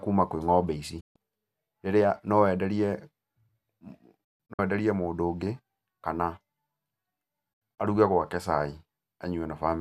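Digital broadcast dropouts hit at 1.00 s, after "ng'ombe ici", and at 4.24–4.59 s and 7.53–7.79 s. The receiver mutes on failed frames. Speech snaps off, leaving short silent holes.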